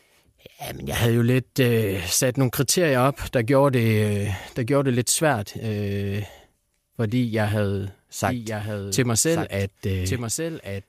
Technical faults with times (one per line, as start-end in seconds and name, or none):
8.28-10.88 doubled audio track